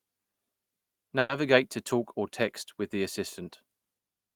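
A call audio freeze runs from 1.19 to 1.31 s. The speech stalls, and the last sound is drawn out as a brief buzz or hiss for about 100 ms rather than dropping to silence. This likely happened because packets were delayed in transit and the jitter buffer emptied, so the receiver extended what it already had. When delivery resumed, the speech carried on from the same point with nothing lost, leaving everything after it running about 100 ms later.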